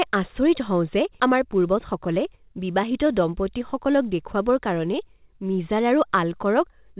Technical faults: skip ahead; jitter buffer speed-up

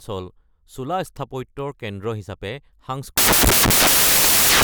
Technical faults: samples built from the wrong bytes

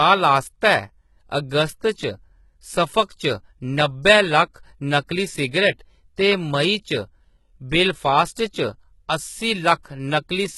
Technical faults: HE-AAC compression; pre-echo

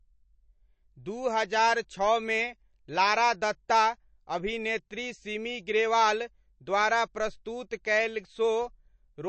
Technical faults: MP3 compression

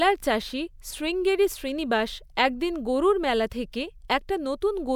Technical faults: none

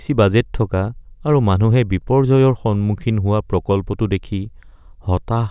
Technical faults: none

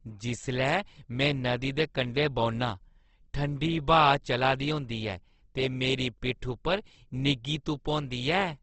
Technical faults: Opus compression

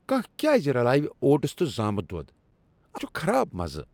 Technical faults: damaged data in a compressed stream

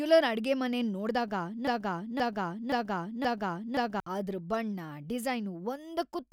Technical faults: broken-record loop

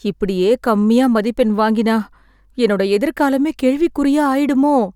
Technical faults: none

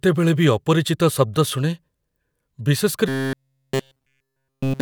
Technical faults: robotic sound from repeated short buffers

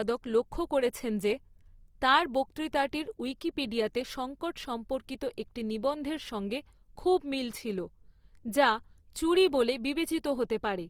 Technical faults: Opus compression

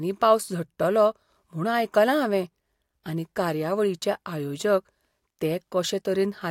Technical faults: none

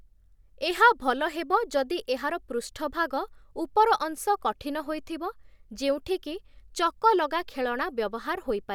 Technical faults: none

